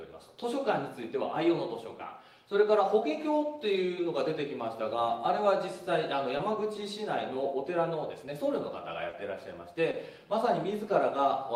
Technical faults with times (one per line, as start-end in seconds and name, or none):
6.37-6.41 short concealed packet loss
9.09-9.15 short concealed packet loss
9.91-9.95 short concealed packet loss